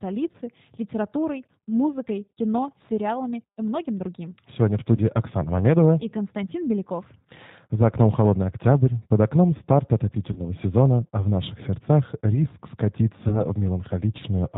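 Speech, carried throughout by a G.729 codec, and the codec damage is plainly audible. The sound is rebuilt from a vocal tract filter and a pitch predictor at 8 kbit/s. Nothing above 4 kHz gets through, so the speech is dull and band-limited. It sounds slightly rough and synthetic. There are also four short dropouts filled in by VoIP packet loss concealment in the speech codec. The first is at 0.32 to 0.37 s, just before "литературой музыкой кино сериалами". The second is at 4.96 to 5.01 s. Both cover about 20 ms of lost audio, which fits a single lost packet. The third runs from 10.32 to 10.40 s, between "октябрь под окном старт" and "сезона а в наших". The fourth runs from 13.28 to 13.41 s. These last two each cover about 40 ms, which points to two packets in a row. In each gap the decoder stretches its last pitch and filter while lowering the gain. Because each frame builds on the one before, the speech stays weak and smeared for a moment after the audio returns.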